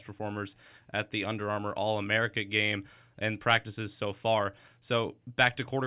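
Nothing stood out on listening to this speech recording.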